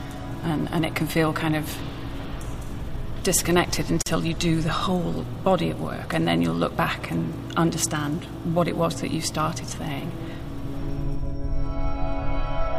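At 4.02 to 4.06 s, a gap at a join of encoded pieces appears. Separately encoded sections meet untrimmed. About 45 ms of silence cuts in, its edges smeared, then sound resumes.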